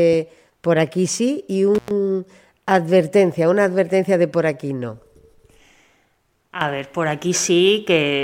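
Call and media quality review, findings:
Intermittent contact at 1.75–1.91 s, right after "por aquí sí y". Speech drops out for about 99 ms with crackle at both edges. Probably a loose cable or plug briefly opening the line; the gap leaves faint hiss until contact restores. Worth reseating connectors.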